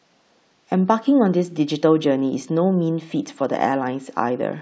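No technical faults can be heard anywhere in this speech recording. There is nothing to place in time order, since no point in the audio calls for a timestamp.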